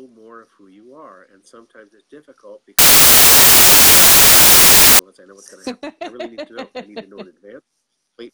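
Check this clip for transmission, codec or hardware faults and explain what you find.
Samples built from the wrong bytes, from 2.79 to 4.99 s: for about 2.2 s the decoder assembles each sample from mismatched bytes, whether shifted by one, swapped in order or misaligned. The rapidly fluctuating low-order bits end up carrying the weight of the high-order ones, so the values jump almost at random. What you hear is a burst of loud, harsh broadband noise replacing the sound, close to white on the louder passages.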